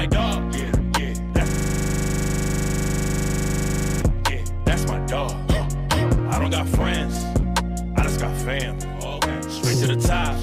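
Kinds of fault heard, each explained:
system hang loop: a 40 ms fragment repeats exactly 63 times at 25 Hz from 1.48 to 4.02 s, because the system froze while hardware kept replaying its buffer.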